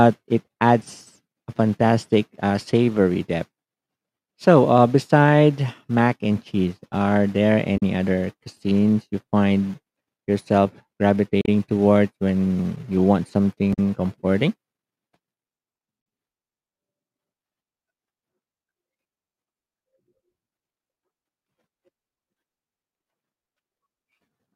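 Damaged data in the compressed stream of this speech recording makes the decoder misread frames, lose sync and hunt for the next header, producing brief glitches at 7.77–7.83 s, 11.41–11.48 s, 13.73–13.79 s and 15.98–16.01 s.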